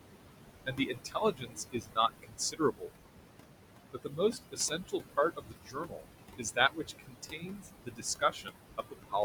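Noise suppressor artifacts run through the whole clip. The suppressor treats steady bands as noise and pulls them down frame by frame, by about 21 dB here. The room noise sits only about 7 dB below the speech, so the suppressor works hard. Between phrases the background sinks away. Under the speech it creeps back.

Speech cut by the noise suppressor follows in six stretches: 0.66 to 1.98 s, 2.22 to 2.9 s, 3.91 to 4.35 s, 4.51 to 5.18 s, 5.36 to 6.06 s, and 6.38 to 9.14 s. The suppressor mistakes parts of the speech for noise and drops them by about 20 to 22 dB. Soft consonants and word endings sound swallowed or faint. The first stretch loses about a second of speech. The last loses around two seconds. The middle ones lose between about 0.3 and 0.7 s each.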